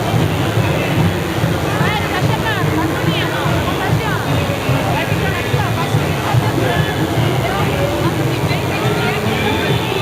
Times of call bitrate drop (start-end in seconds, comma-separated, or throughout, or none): none